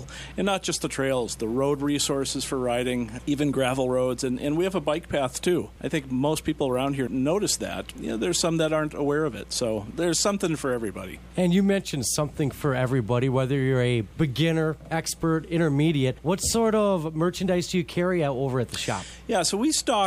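Nothing is technically wrong with this audio.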